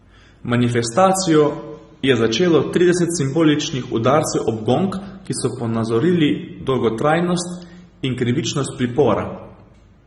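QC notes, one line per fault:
Throughout, AAC compression: speech is dull and smeared, sibilants fizz and warble, likely from AAC-LC at around 24 kbps dropping highs and leaving spectral holes.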